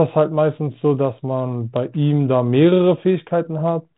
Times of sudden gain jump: none

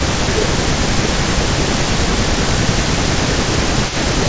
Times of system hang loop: none

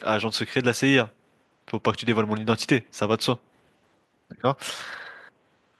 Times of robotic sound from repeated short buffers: none

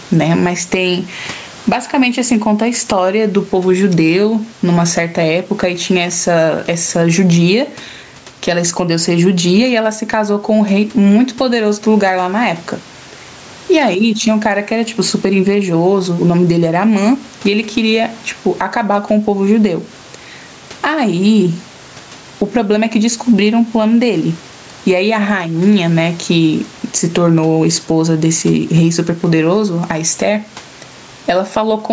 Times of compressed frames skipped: none

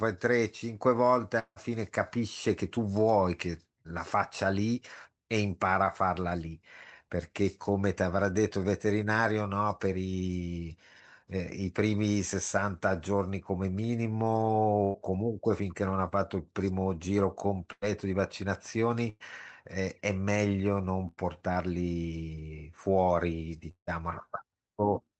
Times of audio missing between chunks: none

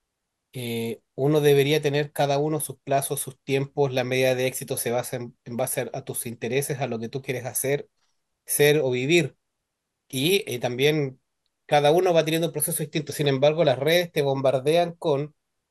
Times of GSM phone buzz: none

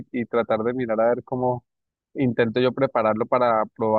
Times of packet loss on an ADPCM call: none

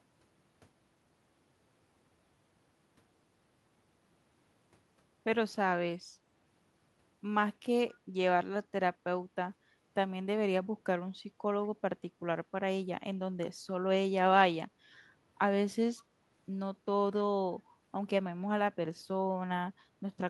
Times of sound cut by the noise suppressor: none

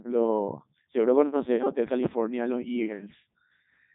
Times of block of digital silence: none

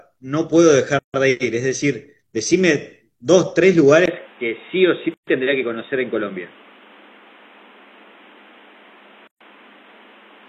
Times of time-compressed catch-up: none

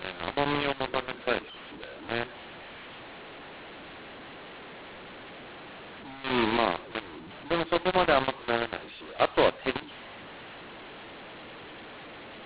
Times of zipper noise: none

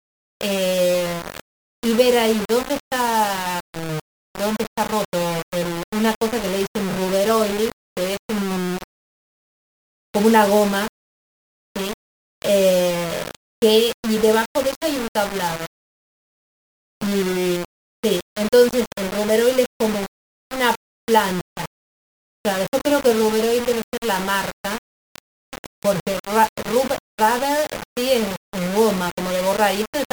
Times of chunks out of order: none

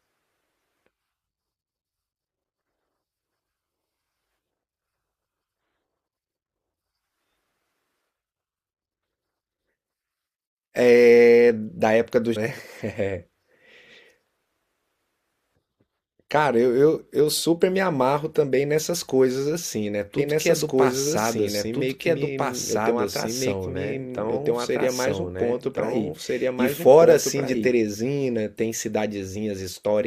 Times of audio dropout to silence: none

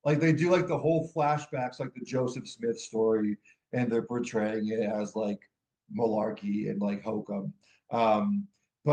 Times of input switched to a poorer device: none

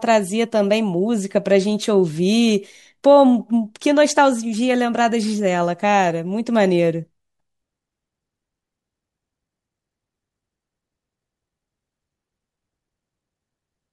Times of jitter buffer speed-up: none

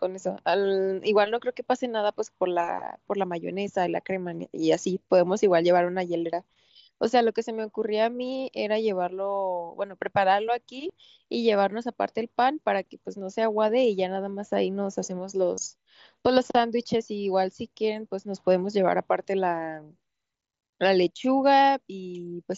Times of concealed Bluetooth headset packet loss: 6.32, 13.68, 15.55-15.58

